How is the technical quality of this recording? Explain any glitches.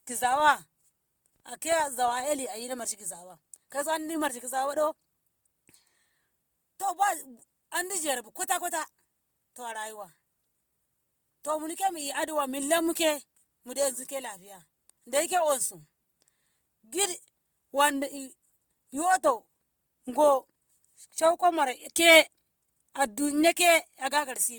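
The recording has two clear technical problems: codec damage throughout, and a short stretch of block-rate buzz at the very start.

From 0.0 to 2.28 s, a filter restarted on every block loses its memory at each block boundary and begins again from silence. Each restart injects a transient, and together they form a 25 Hz buzz that rises and falls with the speech level. That rate suggests blocks about 40 ms long.

For the whole clip, the speech carries plainly audible codec damage, with grainy, rough, noise-like texture where detail should be. The likely cause is Opus compression in its music (CELT) mode at a low bitrate, around 24 kbps. Starved bands are filled by folding or noise rather than left empty, so the result is grit rather than swirl. The bandwidth stays full, with content reaching 20.1 kHz.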